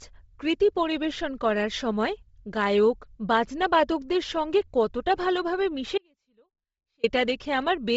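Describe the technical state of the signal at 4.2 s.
At 4.2 s the speech carries heavy codec damage, present through the whole clip rather than just this moment. Nothing sounds above about 7.7 kHz. The upper band has a breathy, grainy edge. The likely cause is Bluetooth LC3 compression. This transform codec works in very short frames and, when starved of bits, zeroes much of the upper spectrum and fills it with noise. The sound fits 7.5 ms frames at around 24 kbps.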